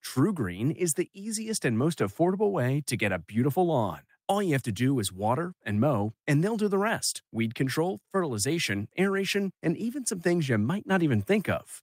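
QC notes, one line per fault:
No faults detected.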